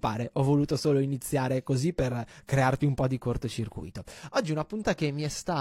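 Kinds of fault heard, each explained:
Damaged data in a compressed stream: a bit of the encoded speech got corrupted, so the decoder choked on those frames and had to hunt for the next valid header. You hear it as a short glitch from about 4.79 to 4.84 s.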